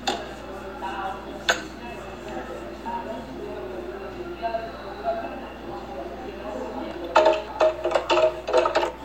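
A recording of everyday sounds with repeated frames. A 52 ms block replays at 2.09 s, and a 26 ms block at 6.22 s. Each stutter lengthens the audio by that span.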